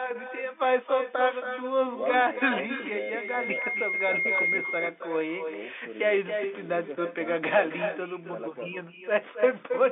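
Throughout, every phrase is shadowed by a thinner copy about 8 dB down and around a third of a second late: echo with no canceller, from the far end's loudspeaker feeding its open microphone. From 2.30 to 4.61 s, a steady 2.1 kHz tone swells over roughly two seconds until it sits above the speech. This is loudspeaker feedback squeal, where the microphone-to-speaker loop gain passed one at that frequency. At 3.62 s there is a momentary buzzy hold, about 10 ms long. This is packet loss with pitch repetition, consistent with one lost packet bridged by repeating the last pitch cycle, heard against the narrow telephone band of the G.711 line.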